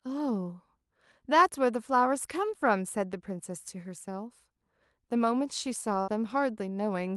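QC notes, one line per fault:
6.01–6.10 s, burst of packet loss: the receiver stretches and fades the preceding sound for 61 ms, then speech resumes with 60 ms missing.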